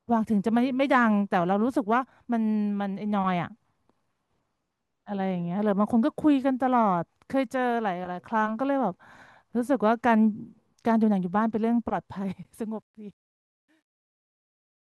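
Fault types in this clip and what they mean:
Truncation distortion on a fade: the fade-out from about 12.1 s passes through a gain stage that drops low bits without dither, which fits an 11-bit path. It turns gritty as it sinks, and from 13.54 s to the end it is at its worst.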